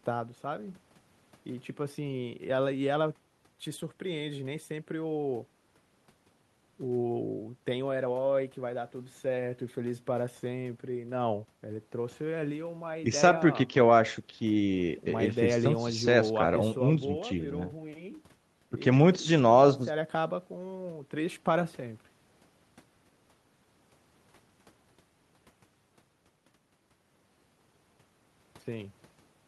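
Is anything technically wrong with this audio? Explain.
No, nothing here is technically wrong with this speech.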